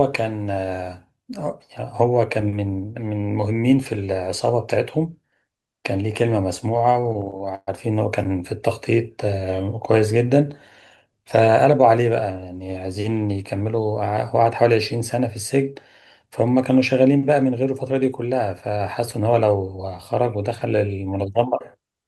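A speech clip with repeated stalls (stutter) between 6.77 and 7.69 s. Within that span the audio halts twelve times, and each time the last sound is stretched on, and faded in the longer waits, up to about 124 ms, while late-arriving packets leave the jitter buffer empty. Roughly 270 ms is filled this way, about 29% of the span. Unlike packet-loss dropouts, nothing is skipped; the speech drags and resumes where it paused.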